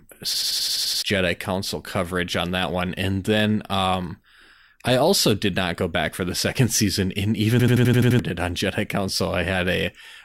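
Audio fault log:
0.34–1.02 s and 7.60–8.19 s (just before "it on"), system hang loop: a machine-gun stutter of one 85 ms fragment repeating at 11.7 Hz, eight times and then seven, because the system froze while the hardware kept replaying a ring buffer that fits 4096 samples. About 0.7 s of audio is lost each time.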